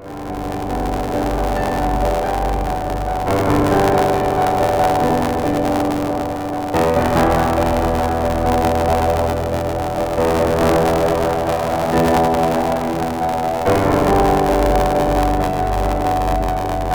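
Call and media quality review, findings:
Buffer tearing throughout: robotic buzz at 86.1 Hz, only under signal. Writer and reader of the playback ring buffer have slipped; roughly a fifth of each period replays audio about 20 ms old, hard-joined. Rate fits a 512-sample buffer.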